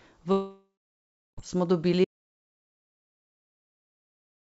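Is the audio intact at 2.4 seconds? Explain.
No. At 2.4 seconds you're inside an audio dropout to silence that starts at about 2.05 s and runs to the end of the clip. The speech cuts off abruptly mid-flow and what follows is dead silence, not even room tone. The likely cause is the input being lost, maybe a disconnected device or a stray mute, while the recording kept writing silence. Whatever was said after 2.05 s is simply gone.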